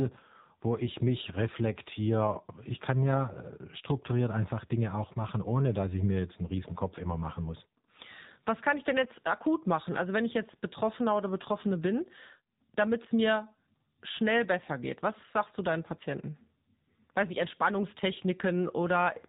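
From start to finish the speech carries the sound of the AMR narrowband mobile codec, with plainly audible damage. Everything above 4 kHz is gone, so a spectrogram shows a hard ceiling there, and the voice is rebuilt from a vocal-tract model fed by sparse pulses in each 5 ms. The result is thin, buzzy and synthetic. That degree of artefacting fits a low bitrate of about 7.4 kbps.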